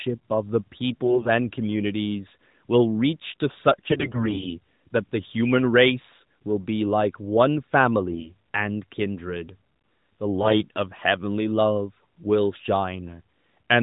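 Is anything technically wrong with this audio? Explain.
Yes. The speech shows AMR bit errors in four bursts: 1.04 to 1.29 s, 3.74 to 4.58 s (the longest), 8.10 to 8.32 s and 10.42 to 10.63 s. On a weak link, the less protected bits in each AMR frame arrive flipped while the check on the critical bits still passes, so the decoder uses them. Roughly one bit in ten is corrupted, and about half that in the third burst. The excitation pulses land in the wrong places, and the fine pitch, gain and spectral values drift. The voice keeps its pitch and loudness but turns hoarse, scratchy and gargly. Packet loss sounds different: concealment produces muted, smeared or repeated stretches, and here nothing drops out. The audio stays narrowband with nothing above 4 kHz, which fits AMR-NB running at its 12.2 kbps mode.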